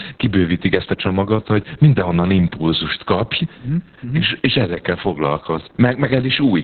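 Opus voice compression runs throughout, starved to a very low bitrate, roughly 6 kbps, in narrowband SILK mode. The band is cut at 4.3 kHz, so the speech sounds muffled and telephone-like, and coarse excitation coding makes it hoarse and faintly robotic.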